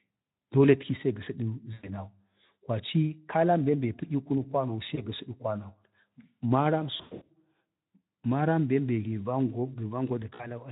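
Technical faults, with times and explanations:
1.73–1.91 s, 4.95–5.06 s, 6.97–7.32 s and 10.35–10.47 s: VoIP packet loss concealed by the speech codec. About 100 ms, 20 ms, 40 ms and, near 7 s, 260 ms scattered across 320 ms (longest gap 100 ms) go missing. The gaps step in multiples that fit 20 ms frames. The Speex decoder repeats its last pitch and spectral shape at falling gain, so the speech smears into a buzzy tone or coloured noise that fades. Because each frame builds on the one before, it stays thin briefly after audio resumes.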